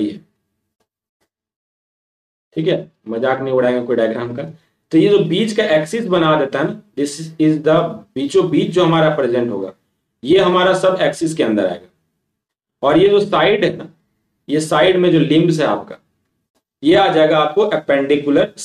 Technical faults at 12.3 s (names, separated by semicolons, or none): none